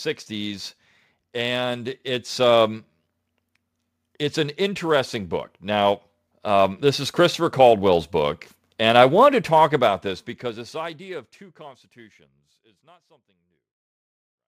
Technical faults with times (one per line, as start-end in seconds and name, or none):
4.58-11.87 automatic gain rising